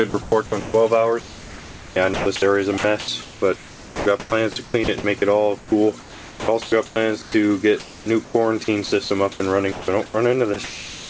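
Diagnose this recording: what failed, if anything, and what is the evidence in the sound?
Call processing failed, likely through sound chopped by the voice detector. From 0.10 to 5.04 s and 5.58 to 11.09 s, about 2.4 s and 2.3 s of audio become comfort noise.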